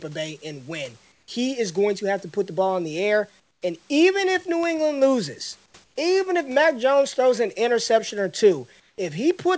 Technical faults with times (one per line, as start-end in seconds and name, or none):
1.12-1.28 comfort noise in place of the background
3.40-3.62 comfort noise in place of the background
4.63 bit error spike
5.66-5.96 comfort noise in place of the background
8.80-8.98 comfort noise in place of the background